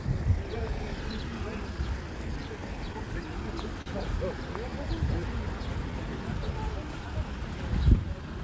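Throughout the clip, small timing hiccups recur at uneven intervals. This is clock drift between sender and receiver, with the sender's clock running a few percent slow, so the receiver's jitter buffer keeps draining.

From 1.06 s to 8.23 s, the sound plays at 97% speed, stretched by about a third of a second overall. These are repeated timing corrections: the receiver keeps repeating short pieces to keep pace with the slower sender.

At 3.82 to 3.88 s, one moment is held 42 ms too long with a slight buzz or dip. This is a short stall from a late packet: the buffer ran empty, so the last sound was stretched until the packet arrived, with nothing lost. Throughout, the G.722 call codec leaves nothing above 8 kHz.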